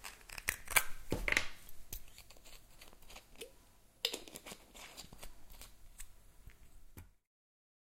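No technical faults can be heard in this sound clip. Toward the end, the level eases down in a smooth fade-out from around 6.5 s to 7.33 s, with no click or hard edge.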